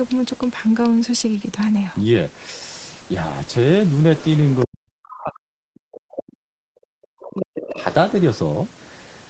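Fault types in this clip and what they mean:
Other side's voice leaking through: a faint second voice, roughly 20 to 25 dB below the talker, slips in twice, briefly around 4.2 to 4.7 s and again from 7.6 to 8.4 s. It's likely far-end playback the echo canceller didn't fully clear from the mic.
Speech suppressed in double talk: from 4.65 to 7.83 s the talker's level sinks, at its deepest by about 40 dB, for around three seconds in all. Likely both sides overlapped and the echo canceller, unable to separate them, pulled everything down.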